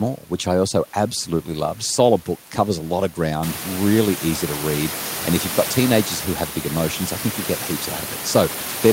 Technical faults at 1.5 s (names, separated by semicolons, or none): none